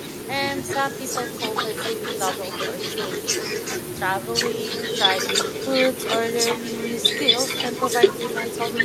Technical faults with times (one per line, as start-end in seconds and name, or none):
0.00-8.85 echo with no canceller